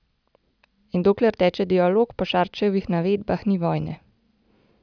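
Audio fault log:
Nothing to log here, since this speech clip doesn't have a single fault anywhere in it.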